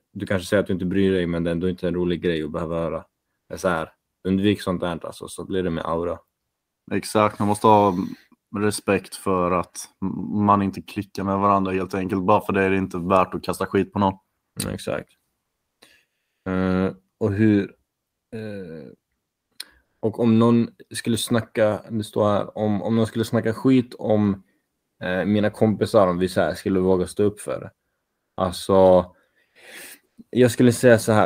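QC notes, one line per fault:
15.43–15.81 s, 19.85–20.01 s, 29.45–29.55 s, 30.05–30.17 s: comfort noise in place of the background. In each pause, the real room sound gives way to a flat, featureless hiss lasting 100 to 380 ms. It is about 10 dB quieter in the first and third gaps, about 6 dB louder in the second, and about 4 dB quieter in the last. The likely cause is Opus discontinuous transmission. The sender stops in silence, and the receiver synthesises noise shaped roughly like the background, so the background's detail vanishes.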